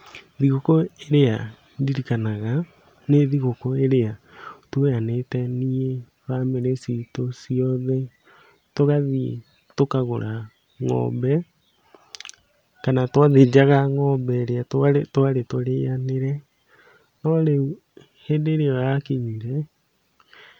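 Speech recording, no technical faults detected on listening.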